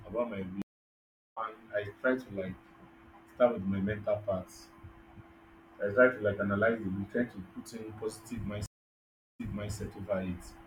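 At 0.62 s, right after "about my", the speech drops to silence for about 0.75 s and comes back at "I try" having skipped roughly 0.7 s of material. At 8.66 s, after "in positive", it goes silent for about 0.74 s, then resumes 0.34 s earlier, repeating a short stretch. Both are a stream reconnect: the connection broke, and the player restarted its decoder partway into the stream. The first resumed at a later point, and the second came back earlier, as when a server resends a burst.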